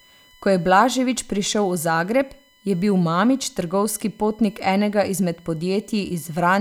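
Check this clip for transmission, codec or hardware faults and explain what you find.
One hardware fault is present in this speech clip.

USB whine, throughout: USB frame-rate current draw leaks through power or ground, producing a steady 1 kHz whine, strongest at 3 kHz, about 35 dB below the speech.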